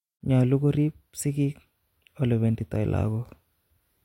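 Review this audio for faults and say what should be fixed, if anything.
No faults turn up in the audio, so nothing needs to be fixed.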